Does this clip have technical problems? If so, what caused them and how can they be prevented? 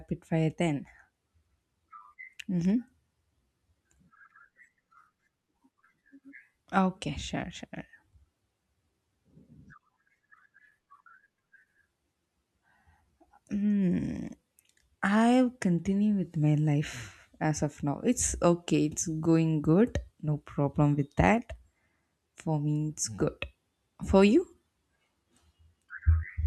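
No, the signal shows no technical faults, so there is no cause to trace and nothing that needs preventing.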